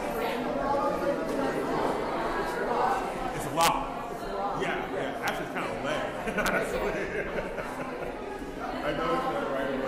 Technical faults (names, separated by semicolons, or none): corrupt frame decoded; integer overflow